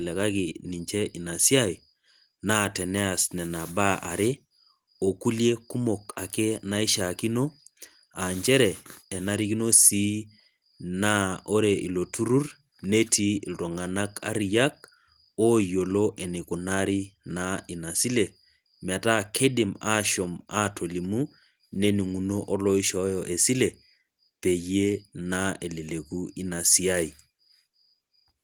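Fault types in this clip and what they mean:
No fault types are present in this clip, so there is nothing to list or explain.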